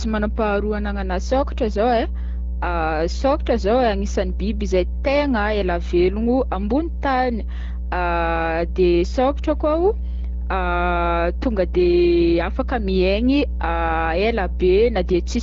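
Mains hum runs through the whole speech clip as a steady 60 Hz tone with low harmonics, sitting only a little below the speech level. It points to a ground loop or nearby transformer coupling the power line into the signal. The band-limiting near 7.5 kHz and light coding texture fit an AMR wideband (HD Voice) codec at a mid-to-high rate.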